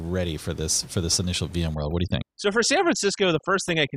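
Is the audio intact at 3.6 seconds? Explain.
No. At 3.6 s you're inside a stretch of overdone noise removal running from 1.75 s to the end. The reducer is gating frequency bands near its noise estimate, so the room noise, about 24 dB under the speech, drops and breaks up into twinkling specks.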